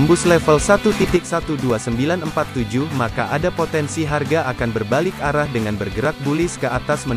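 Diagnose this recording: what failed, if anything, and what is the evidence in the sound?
At 1.16 s the sound falls abruptly by about 6 dB for the rest of the clip: likely one channel drops out in analogue wiring, halving the mono sum.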